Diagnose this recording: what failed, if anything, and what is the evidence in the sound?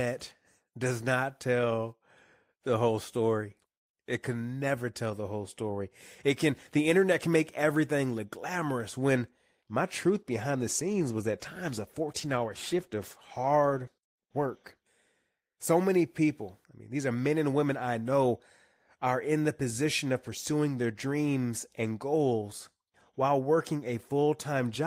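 Call bitrate drop at the codec, 10.09 to 14.89 s. Speech turns coarse and muffled. That fits encoding cut from 32 to about 15 kbps.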